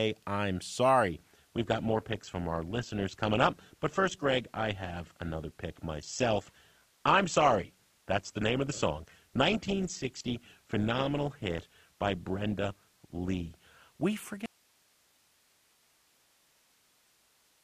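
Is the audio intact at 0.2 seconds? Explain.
Yes, at 0.2 seconds the speech plays through intact, with no dropout, click, distortion or other fault at that moment.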